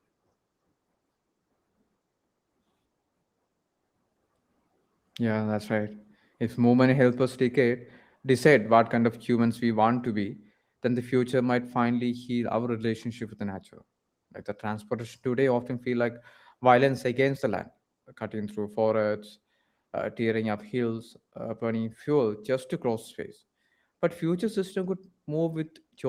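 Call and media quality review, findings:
No faults found; the speech runs through Opus in hybrid mode at 24 kbps with full bandwidth retained and only light coding texture audible.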